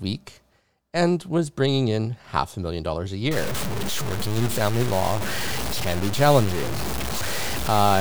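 From 3.31 s to the end at 8.01 s the sound turns harsh and grainy, a rasping distortion that tracks its level, with quiet stretches sputtering or collapsing to silence. The likely cause is low bit depth without dither: truncation to 4 bits leaves error only about 10 dB below the signal.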